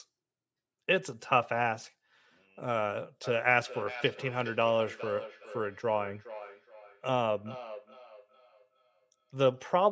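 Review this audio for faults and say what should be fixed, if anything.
From 3.24 s to 9.6 s, each phrase of speech comes back as a fainter copy roughly every 400 ms, peaking at about 16 dB below the speech. This is feedback echo between two devices: a second device in the room plays back what this microphone sent, and the microphone picks it up again. Its own echo canceller cannot remove sound from another device's speaker. To prevent it, keep only one device joined to the call in that room, or mute the other device's speaker.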